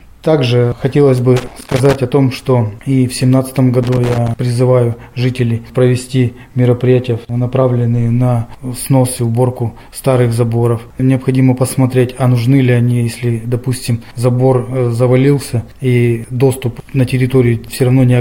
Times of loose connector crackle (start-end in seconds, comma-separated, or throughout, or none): 1.37-1.95, 3.83-4.37